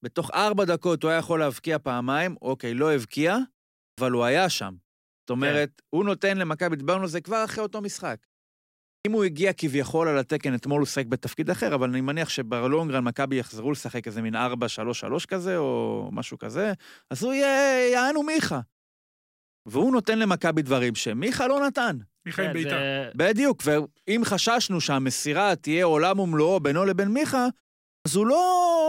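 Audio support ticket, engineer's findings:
Output device sleeping during silence and slow to wake or relock: clipped start after a pause at 3.89, 5.19, 8.97, 19.57 and 27.97 s. Gaps of 0.42 to 0.93 s precede each; about 80 to 90 ms of onset lost, so speech resumes abruptly without its first sounds.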